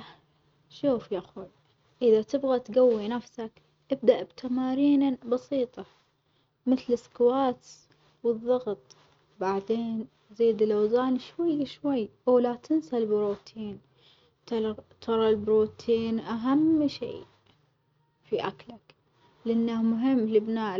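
No technical faults can be heard in this recording.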